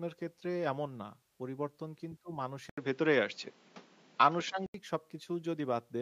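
A speech recording in which, from 2.70 s to 4.74 s, the sound turns duller after a gap of 80 ms, with nothing above 7.4 kHz, a level shift of roughly 5 dB and a new noise floor roughly 30 dB below the speech. The likely cause is the input switched to a poorer device. On a spectrogram the upper band goes blank across that stretch, while the waveform shows the brief flat gap and a step in amplitude.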